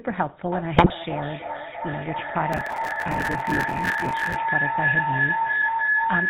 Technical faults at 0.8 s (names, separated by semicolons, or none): GSM full-rate codec; feedback howl; GSM bit errors